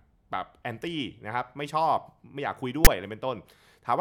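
At 2.85 s the speech is interrupted by a very short burst of file tags played as audio. A block of text metadata stored in the file has been decoded as if it were sample data. Because the bytes of ordinary text fall in a narrow, mostly positive range, the result is a loud rasp sitting offset to one side of zero rather than centred noise. It is heard as a hard-edged click of static, lasting under 20 ms.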